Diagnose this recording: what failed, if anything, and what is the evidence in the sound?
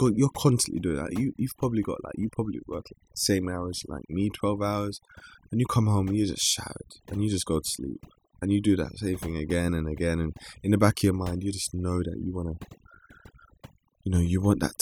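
Overdone noise removal in the processing stage runs through the whole recording. Spectral subtraction set too aggressively gates frequency bands near its noise estimate, so the background drops with twinkling specks and quieter parts of the speech go with it. A spectrogram shows scattered isolated dots and gaps in the quieter speech energy.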